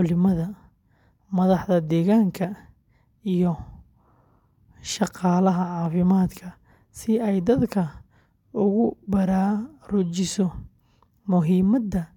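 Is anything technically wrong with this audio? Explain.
No, nothing is technically wrong with this audio.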